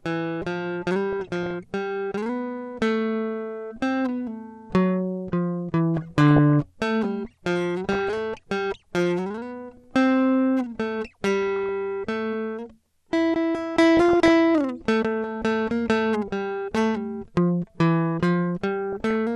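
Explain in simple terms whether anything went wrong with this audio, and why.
The music sounds dull and plainly gurgly all the way through. Its upper frequencies are thin, and it sounds grainy. That is MP2 compression, likely from squeezing the music into too little data. Whole high-pitched bands get switched off and flicker.

Six times, short bursts of blipping noise sit over the music: 1.12–1.54 s, 5.97–6.52 s, 7.84–8.18 s, 11.43–11.69 s, 13.97–14.30 s and 18.93–19.13 s. This is DAB burbling. Reception errors corrupted the audio data, so short blips of noise appear in single frequency bands.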